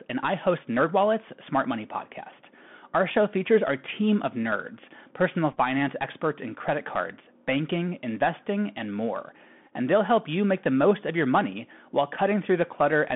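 Throughout the speech, the Bluetooth CVSD headset codec confines the audio to a line band of roughly 150 Hz to 3.5 kHz, so everything above that is missing and the sound is narrow and boxy. The damage is plainly audible. CVSD encodes each sample as a single up-or-down bit with an adaptive step, which fits a 64 kbps link. Sibilants come out scratchy, loud bright passages distort where the step cannot keep pace, and a granular hiss sits beneath the speech.

At 5.52 to 5.57 s, a Bluetooth headset packet repeated fault appears. About 22.5 ms of audio was lost, scattered across a 45 ms stretch, which fits roughly six lost 3.75 ms packets. The decoder replayed the previous packet's bits in place of each missing one. The longest unbroken run is about 10 ms. It sounds like a brief, rough buzzy flutter near 267 Hz, the rate of the 3.75 ms repeats, rather than a clean gap.

At 9.67 to 9.72 s, the same packet-repeat fault recurs with 11.2 ms lost, which fits about three packets. 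Again the chip re-decoded stale packet data instead of muting. Because the loss is shorter, the result is a quick gritty tick-and-buzz on the speech.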